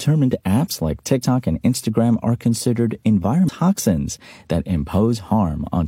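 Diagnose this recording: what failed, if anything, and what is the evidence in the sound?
At the codec stage, damaged data in a compressed stream gives a brief glitch from 3.44 to 3.49 s after "are considered", where corrupt frames misdecode.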